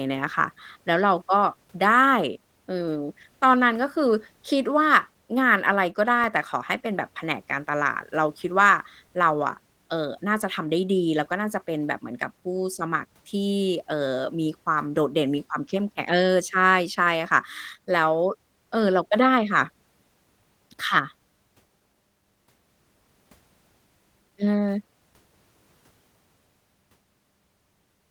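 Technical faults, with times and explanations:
6.08 to 6.56 s, CD scratch ticks: four brief ticks, each about a millisecond at most, evenly spaced at about six a second. A scratch wipes more data than error correction can rebuild on each disc turn, so the player patches the gap.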